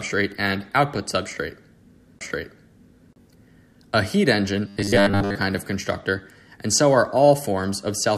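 Likely starved of incoming audio, playback loops a 10 ms buffer across 4.68–5.36 s, causing robotic sound from repeated short buffers: a metallic 100 Hz buzz before "of constructor and so".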